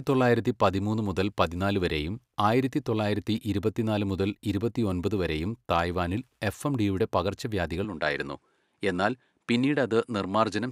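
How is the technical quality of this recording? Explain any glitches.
The recording has one glitch near the end. At 7.85 s the sound changes character until the end. It is likely an input switched to a poorer device. Nothing above about 11.4 kHz passes, so the speech turns slightly duller. A faint new background noise appears, well below the speech. The level stays about the same, and there is no gap at the switch.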